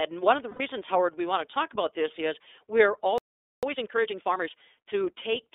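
The speech runs through the iLBC codec from start to finish. The line is band-limited to roughly 300 Hz to 3.7 kHz, so it sounds thin and boxed in. Each frame's excitation is coded on its own, and the result is plainly rough and a little synthetic. The grain fits iLBC's 13.33 kbps mode with 30 ms frames. Nothing above the telephone band survives.

From 0.50 to 0.61 s there are lost iLBC frames. The gap is about 90 ms, which fits three lost 30 ms frames. The decoder filled it by repeating the last pitch cycle with added noise. It sounds like a short held vowel with a faint buzz. The speech returns cleanly right after, because each frame decodes without help from the one before.

At 3.18 s comes a playback stall. The sound cuts off mid-flow and stays silent until 3.63 s. That is about 0.45 s of dead air. The player most likely ran short of data, or its output thread was blocked. Then the sound resumes.

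From 3.63 to 4.51 s there is time-compressed catch-up. The player is working off the backlog the stall left behind. It cuts out small slices and cross-fades the joins. The speech runs at 1.5 times normal speed but keeps its pitch. It sounds hurried.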